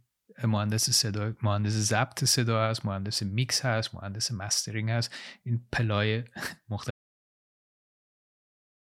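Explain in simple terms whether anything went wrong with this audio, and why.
At 6.91 s the input signal was likely lost, an audio dropout to silence. The speech stops mid-flow, and complete silence with no room sound runs to the end.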